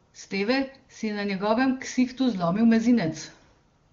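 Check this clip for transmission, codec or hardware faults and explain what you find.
I find no faults to report in this clip.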